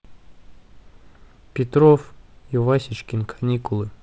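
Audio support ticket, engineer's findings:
No faults found in the speech. The G.722 wideband telephone coding at 48 kbit/s shows as a top end ending near 7 kHz, a faint hiss in the upper band and a slightly grainier lower band, consistent with light codec colouring.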